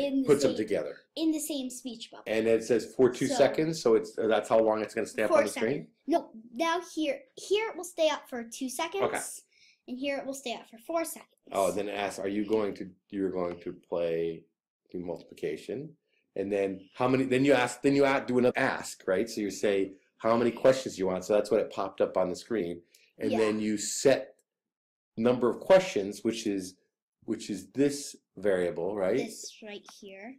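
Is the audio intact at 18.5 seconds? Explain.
No. Right at 18.50 to 18.52 s there's a case of compressed frames being skipped. A run of about ten frames of the encoded stream never got played, either missing from the file or thrown out by the decoder as damaged, so the sound jumps forward by roughly 0.15 seconds. You get a short glitch at the join where the audio lurches ahead.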